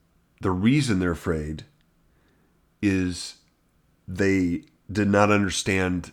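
No technical faults can be heard anywhere in this speech recording.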